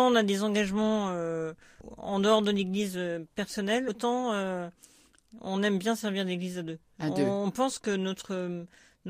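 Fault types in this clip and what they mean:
Compressed frames skipped: At 1.81 s and again at 3.88 s the speech lurches forward, losing roughly a tenth of a second each time. Whole blocks of the coded stream never reached the output, either absent from the file or rejected by the decoder as corrupt, so playback resumes later in the audio. The size of each jump fits about five frames.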